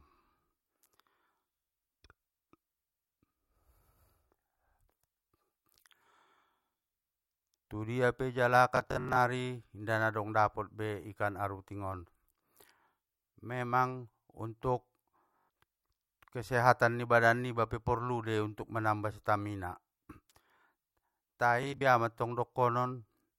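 A rapid buzzing stutter breaks into the speech at 8.77 to 9.17 s, again at 15.38 to 15.49 s, and at 21.63 to 21.81 s. Each time, tiny slices repeat in a machine-gun pattern before the speech jumps forward. This is Bluetooth stutter: packets arrived late or not at all, so the receiver replayed its last buffer until fresh data came. About 210 ms of sound goes missing across the first burst, whose longest unbroken run is 64 ms. Roughly 110 ms drops out in each of the other two.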